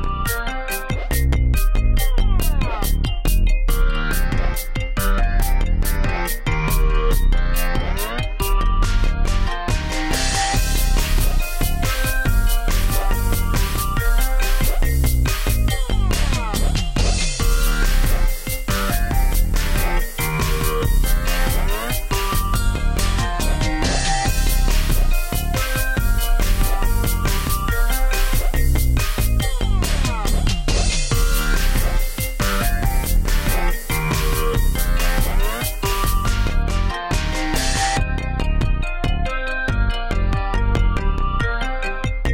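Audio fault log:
No faults heard anywhere in this recording.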